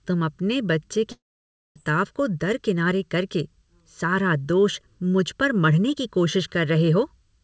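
Throughout, the speech sounds hollow and phasey, with fixed notches starting near 700 Hz and repeating evenly upward, all within a band that stops at 8 kHz. This is channel delay (comb filtering): one channel trails by roughly 0.7 ms, and mono summing cancels their shared content there.

From 1.12 s to 1.77 s, the speech gives way to a short fading buzz or hiss, then near silence, and resumes with that stretch gone. This is likely a long network dropout: about 0.64 s never arrived, and concealment briefly extended the last sound before falling quiet.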